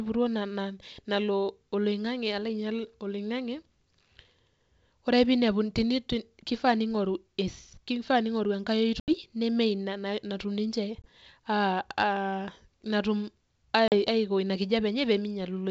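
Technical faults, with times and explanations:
9.00–9.13 s, 11.02–11.09 s and 13.88–13.95 s, packet loss on an ADPCM call: the speech drops into hard-edged silent holes of about 80, 20 and 40 ms. After each hole the sound returns with brief, slight distortion, before settling within tens of milliseconds. The first gap comes just before "neme inia natum ninche" and the second just after it. The missing packets were filled with silence, so the G.722 decoder's predictor and step size lost sync with the sender's and had to re-converge.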